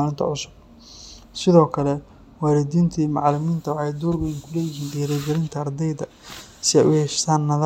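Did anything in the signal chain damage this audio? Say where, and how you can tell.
No, nothing in the signal chain stood out as damaging this speech on listening.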